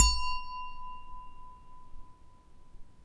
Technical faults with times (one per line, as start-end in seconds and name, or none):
0.00-3.04 wrong sample rate